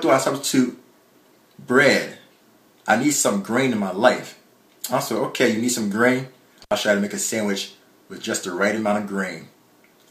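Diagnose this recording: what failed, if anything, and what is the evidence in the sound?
Analogue wiring: an intermittent contact at 6.63 to 6.73 s, where a loose plug or cable opens for about 67 ms, cutting the audio out with crackle at both edges.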